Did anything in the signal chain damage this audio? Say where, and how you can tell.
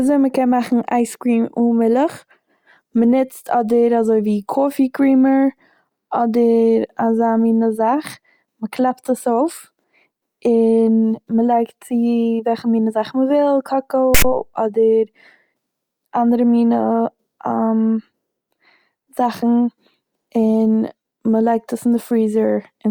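Yes, at the storage stage: file tags played as audio at 14.14–14.24 s, where text bytes read as samples give a hard-edged, one-sided rasp, then padding drops to silence.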